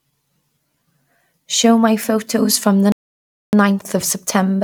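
Right after "my photos from the", at 2.92 s, there's a rebuffering stall: playback starves, goes silent until 3.53 s, then picks up exactly where it stopped, adding about 0.61 s.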